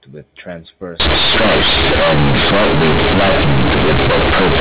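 From 1.0 s to the end at 4.6 s, the speech collapses into harsh, overloaded buzz: companded audio read as linear. The A-law bytes are being played back as plain 8-bit samples without expansion, so each sign change throws the output across roughly half its range and quiet passages come out as loud as peaks. On a waveform the trace becomes a dense block, and the spectrogram fills with broadband noise, even in pauses. Before 1.0 s, the G.711 telephone band sounds as expected, with nothing above 4 kHz.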